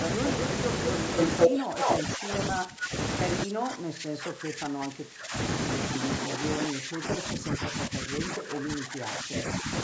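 At 1.16 to 1.5 s, an echo canceller at the far end likely failed to cancel what its microphone picked up from its loudspeaker, and the residue was sent back as an echo leak. The sound returns about 212 ms late, noticeably louder than the talker. A second, shorter burst at 1.81 to 1.99 s has the same 212 ms delay and sits somewhat above the speech level, heard as a brief doubling.

From 1.47 to 2.93 s, both sides are active at once, and the echo canceller likely could not tell the local talker from loudspeaker echo, so it turned both down. This is speech suppressed in double talk. The speech dips by up to around 20 dB, fading and thinning in patches over about a second. The same suppression returns at 3.45 to 5.35 s, cutting deeper, up to around 25 dB, over about two seconds. It comes back once more at 5.97 to 9.71 s, with shallower drops of around 15 dB but spread over roughly three seconds, so the talker keeps receding and returning.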